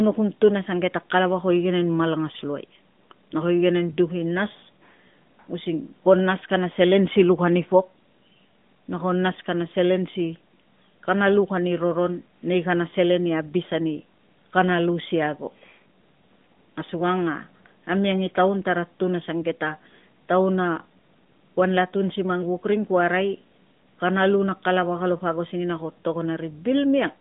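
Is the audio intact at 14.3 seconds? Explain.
Yes, the audio is intact at 14.3 seconds, with the speech carried cleanly through the AMR narrowband mobile codec's telephone-band path, which leaves it limited to roughly 150 Hz to 3.6 kHz.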